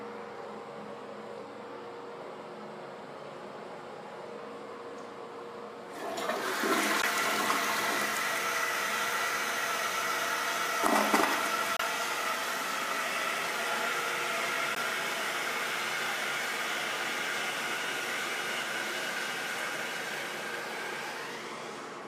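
Bluetooth dropouts occur at 7.02 to 7.05 s, 11.77 to 11.81 s and 14.75 to 14.77 s. Each is a brief hole. About 14, 28 and 14 ms of audio go missing, which fits one or two lost packets. The sound resumes as if it had kept playing, likely because late packets were dropped before reaching the headphones.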